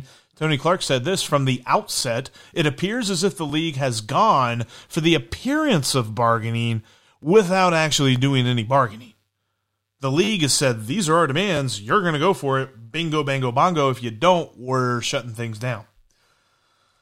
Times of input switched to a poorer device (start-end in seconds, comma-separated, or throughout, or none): none